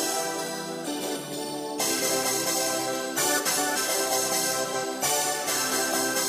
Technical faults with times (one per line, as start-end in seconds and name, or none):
0.85-1.17 frames out of order
3.38-3.77 frames out of order
4.63-4.84 frames out of order